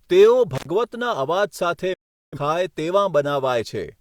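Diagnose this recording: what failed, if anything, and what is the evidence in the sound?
Intermittent contact in the analogue wiring: at 0.55 to 0.67 s the speech breaks for about 77 ms, with crackle at both edges as the loose connection opens and recloses. Unlike a digital mute, the gap has rough, noisy transitions rather than a clean cut.

A digital broadcast dropout sits in the reception chain: from 1.93 to 2.38 s the audio fades out within 8 ms and stays silent for about 384 ms. That fits roughly nine failed frames being muted. The quick, clean fade and the dead silence mark it as a decoder mute rather than a cable fault.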